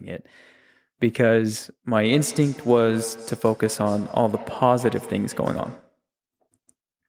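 From 1.88 s to 6.01 s the speech returns about every 150 ms in thin, ringing copies, peaking about 17 dB below the direct sound. This is a feedback echo between two devices: one device replays the other's microphone, which recaptures it beyond that device's echo canceller.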